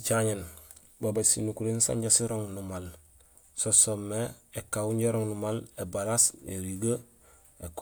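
No technical faults can be heard in this speech recording.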